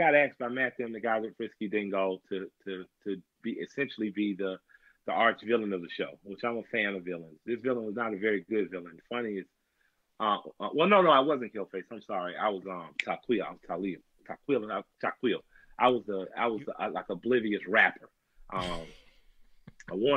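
A faint disturbance, peaking at about -54 dBFS, sits at 2.83 to 2.86 s: a corrupt FLAC frame, whose damaged bits derailed prediction from that point on within that single frame.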